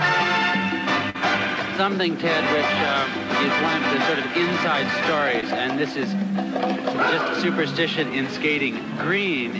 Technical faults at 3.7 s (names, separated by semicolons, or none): none